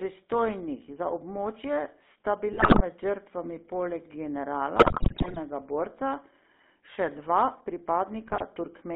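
Throughout the clip the speech carries the GSM full-rate codec's character: a buzzy, gravelly texture from the coarse pulse excitation, in a band of roughly 200 Hz to 3.6 kHz, which fits the 13 kbps full-rate coder. The damage is plainly audible.

GSM bit errors occur from 2.52 to 2.81 s, between "za območje sta" and "med žrtvami poleg", then from 4.76 to 5.39 s and from 8.26 to 8.43 s. Corrupted filter, pitch and gain parameters distort individual frames, so the sound breaks into squawks, pops and gargling.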